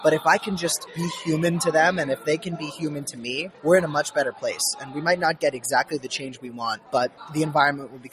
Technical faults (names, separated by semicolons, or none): noise suppressor applied to music or sounds; sound cut by the noise suppressor